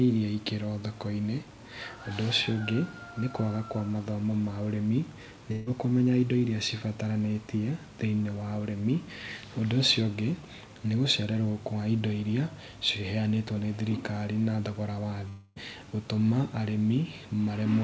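At 5.52 to 5.68 s a burst of packet loss cuts the speech: the receiver stretches the last sound for about 140 ms, fading it, then jumps ahead past the missing stretch. On a spectrogram, a smeared, repeating band pattern dims, then stops abruptly where fresh speech resumes.

From 15.28 to 15.58 s the speech gives way to a held, fading continuation of the last sound lasting nearly 0.3 s before speech returns with a piece skipped. This is likely a long network dropout concealed by the receiver. The waveform shows a decaying, regular tail with no silent gap, and above the 8 kHz ceiling of the call codec the spectrogram stays empty throughout.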